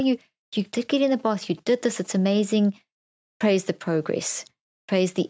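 From 0.96 to 2.39 s, a nearby 2G phone is signalling to its network in short groups of radio bursts. The audio circuit rectifies these into GSM signalling bursts, a galloping dit-dit-dit of brief 217 Hz buzzes roughly 30 dB below the speech.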